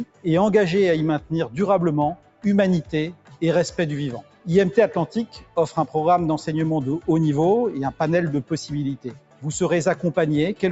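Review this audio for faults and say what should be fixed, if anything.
Held sounds and tails pump and thin, swinging by around 10 dB. A speech-tuned noise suppressor was left on, mistaking sustained tones and ambience for noise.

Sound cut by the noise suppressor: brief dips of about 12 dB at 0.05–0.25, 2.15–2.44, 3.13–3.42, 4.22–4.47 and 8.97–9.44 s, and about 10 dB at 5.31–5.57 s. In each, the suppressor took the sound for noise and turned it down.

To prevent this, disable the noise suppressor, or switch to a music mode, whenever the source is not speech.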